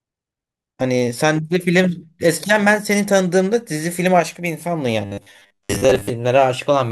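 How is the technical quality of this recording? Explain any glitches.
The recording has one clear fault near its end: robotic sound from repeated short buffers, from 5.01 s to 6.10 s. Over that stretch the speech turns into a rigid, metallic buzz pitched at 100 Hz that still loosely tracks the speech. The likely cause is audio arriving too seldom, so playback fills gaps by looping a short chunk of about 10 ms, which sets the 100 Hz pitch, while roughly half the real audio is skipped.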